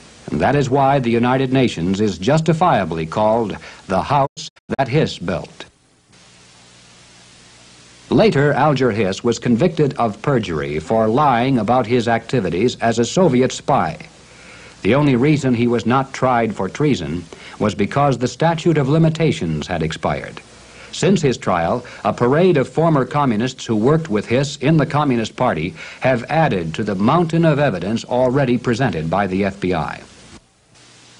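At 4.25 s a digital broadcast dropout begins. Corrupted or missing frames force the receiver to mute, opening several short holes across about half a second, the longest 96 ms, each entered with a 20 ms fade. Sound returns at 4.80 s, and the missing material, about 288 ms in all, which fits roughly nine lost frames, is gone.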